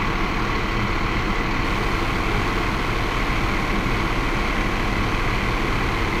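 From 1.64 s to the end, a steady raspy mains buzz enters, built on 50 Hz harmonics from switching spikes, sitting roughly 10 dB below the sound.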